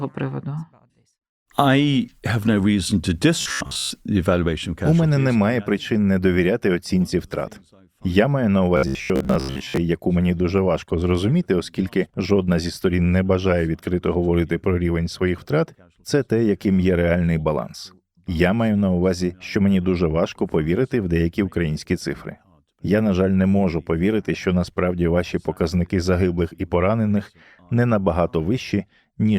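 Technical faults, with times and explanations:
3.41–3.91 s and 8.77–9.77 s, robotic sound from repeated short buffers: the speech collapses into a rigid, metallic buzz at about 66.8 Hz that only loosely tracks the words. The second stretch falls between "маю на" and "яку мені дуже важко". This is likely caused by new audio arriving too slowly, so playback keeps looping a segment of roughly 15 ms. The loop rate fixes the pitch, and most of the real audio in these stretches is skipped.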